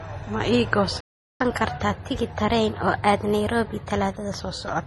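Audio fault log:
throughout: transcoding between lossy codecs. Artefacts of different encoders are heard together. This likely comes from several lossy encodes in a row.
1.0–1.4 s: playback stall. The speech cuts to silence for about 0.4 s in mid-flow. The player likely ran out of data before it recovered.
1.4–4.4 s: catch-up at higher speed. The speech plays 1.1 times fast, with pitch about one and a half semitones higher. It wins back some of the lost time, then returns to normal.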